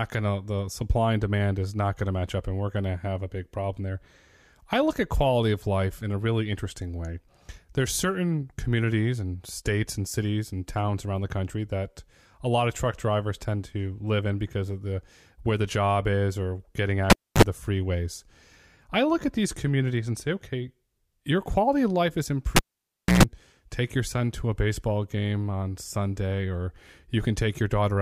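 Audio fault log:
17.10–17.42 s and 22.56–23.23 s, cable pulled and plugged in: after "job is or getting" and "quality of life is", a pop, then dead air for 0.27 s and 0.62 s. Just before the sound returns, a 41 ms burst of 50 Hz hum and a 122 ms burst of 60 Hz hum come from the bare tip grabbing mains, then a second pop.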